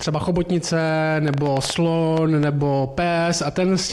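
From 1.28 s to 2.44 s a train of clicks rides over the sound: about ten sharp, similarly shaped pulses at an uneven pace averaging nearly seven per second, peaking well above the programme level. The likely cause is electrical interference or a struggling interface injecting spikes into the path. Unlike random crackle or a single pop, these clicks share one shape and recur as a burst, ticking through quiet moments as well as louder ones.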